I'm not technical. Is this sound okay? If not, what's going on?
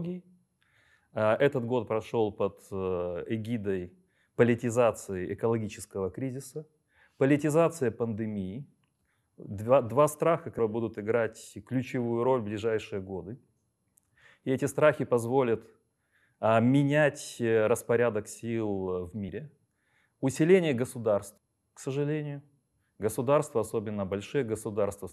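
No. The speech skips forward three times because compressed frames were skipped. A short stretch of the recording is lost each time, and the join sounds like a brief smeared blip rather than a sharp click. At 10.58 s, after "два страха", about 150 ms is missing. At 19.28 s, after "менять распорядок сил в", about 70 ms is missing. At 21.37 s, just before "к сожалению", about 150 ms is missing.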